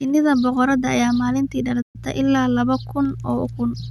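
A playback stall occurs at 1.81 s, just after "boqorada ayaa maalinti": the speech cuts out and the output goes silent for about 124 ms before resuming with "ilaa laba kun" at 1.96 s. The likely cause is the player running short of data or its thread being blocked.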